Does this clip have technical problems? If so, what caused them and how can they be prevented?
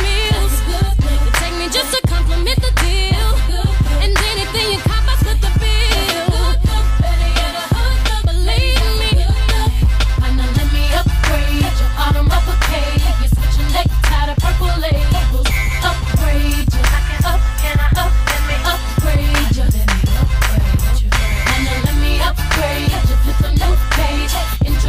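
No, there are no technical problems to point to in this clip. Nothing in it calls for a cause or a preventive step.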